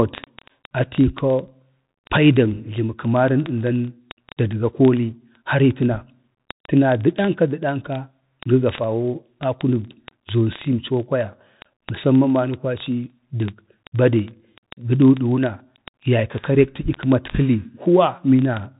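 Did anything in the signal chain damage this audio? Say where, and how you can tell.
Yes, at the codec stage, throughout the speech. It has the Bluetooth CVSD headset codec sound. Nothing passes above 3.8 kHz. A granular hiss sits underneath, and s sounds turn scratchy. A one-bit delta coder tracks the waveform, which fits 64 kbps CVSD. Its adaptive step can't follow fast high-frequency detail.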